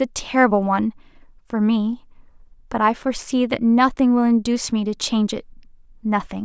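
No technical faults can be heard anywhere in this speech recording. There is nothing to place on the timeline.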